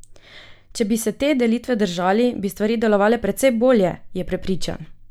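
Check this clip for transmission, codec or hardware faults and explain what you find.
Nothing stood out on listening to this speech recording that would point to a transmission, codec or hardware problem.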